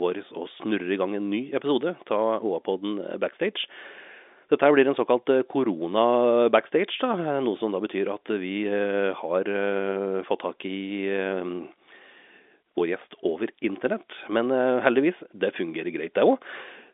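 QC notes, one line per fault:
No faults heard; telephone-band speech, nothing above 3.8 kHz.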